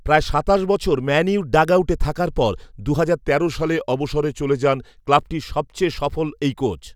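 At 3.25 s the speech suddenly drops about 6% in speed and roughly 109 cents in pitch, a bit over a semitone flat, so it sounds slower and deeper all at once. It holds there until 5.22 s, then snaps back to normal. That's a drift correction step, likely a clock-matching routine changing the playback rate in one jump to rebalance its buffer, rather than easing the rate gradually.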